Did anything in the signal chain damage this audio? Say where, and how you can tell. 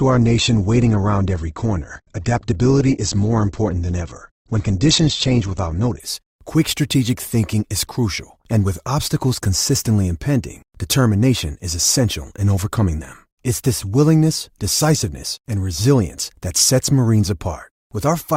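Yes. For the first 6.0 seconds the speech sounds thin and smeared, with nothing above 8.2 kHz and audible codec artefacts. Right at "quick strategic thinking is" the treble returns and the artefacts fade, with no gap. This is an adaptive stream starting at a low bitrate: the player began on a low-bitrate version, consistent with Opus near 12 kbit/s, then switched to a better stream, around 64 kbit/s, once it had measured the connection.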